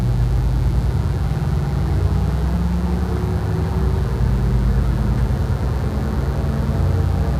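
A steady, raspy mains buzz runs under the sound from start to finish, sitting roughly 25 dB below it; switching spikes on a 60 Hz supply, likely from a dimmer, rectifier or unshielded cable, spray harmonics up into the kilohertz range.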